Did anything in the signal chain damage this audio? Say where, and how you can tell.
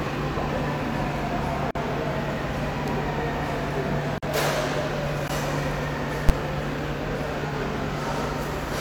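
Yes. The driver or buffer stage missed its deadlines, leaving blocks of digital silence at 1.71–1.75 s and 4.18–4.23 s, each about 46 ms, which fits a 2048-sample buffer, plus a 15 ms block at 5.28 s. The sound cuts to zero and back with no fade.

In the processing arithmetic, a calculation produced invalid numbers, and sample-format conversion pinned them at full scale for 10 ms at 6.29 s. A block that short is heard as a single very loud bang rather than two separate edge pops.

At the codec stage, one AAC frame, about 43 ms, was lost at 7.48–7.54 s, and the decoder concealed it by rebuilding from the previous good spectrum. Because the gap is short, the concealment leaves a brief smeared, noisy patch instead of a fade to silence.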